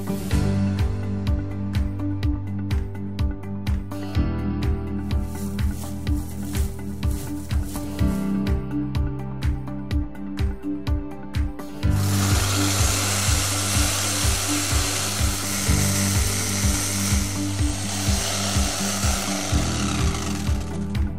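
A DC offset of about -36 dBFS runs throughout, shifting the waveform off the zero line, inaudible itself, but visible as a steady band at 0 Hz on a spectrogram.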